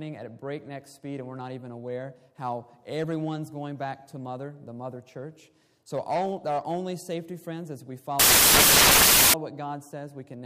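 From 8.20 to 9.34 s the samples are built from the wrong bytes. Misaligned byte order turns low bits into loud, harsh broadband noise.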